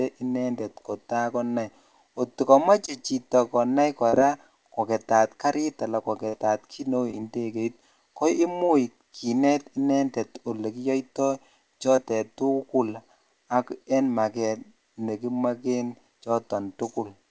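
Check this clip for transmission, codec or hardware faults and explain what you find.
Two kinds of transmission fault are audible in the speech, both from lost packets, heard through a call codec whose sound fits G.722 at 64 kbps, with nothing above 8 kHz.

Short concealed packet loss at 2.86–2.89, 4.09–4.14, 7.11–7.14, 8.66–8.70 and 11.96–11.99 s: 20 ms of audio (40 ms at 4.09 s) arrived too late to decode. The receiver extended the preceding sound for 10 to 31 ms before blending back, so each spot is a brief smear or wobble.

A burst of packet loss at 6.28–6.35 s: 40 ms went missing in a row. The receiver stretched the last sound over 47 ms while fading it, which gives a short held buzz or dying hiss, and then the speech picks up with that stretch gone.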